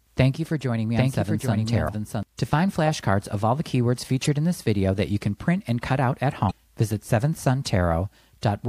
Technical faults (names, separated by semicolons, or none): doubled audio track; damaged data in a compressed stream